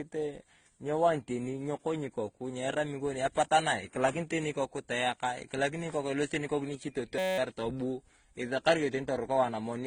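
Speech, likely passed through a chain of lossy codecs in series, a case of transcoding between lossy codecs: stacked smeared, swirly artefacts and nothing above 9.7 kHz throughout. From 7.18 to 7.38 s a system hang loop occurs. The machine froze while the audio hardware kept replaying a 5.33 ms buffer, which fits 256 samples, and this produces a steady 188 Hz buzz.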